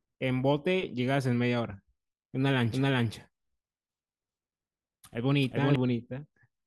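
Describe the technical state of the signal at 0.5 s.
At 0.5 s the signal is intact, with no technical fault audible at that point.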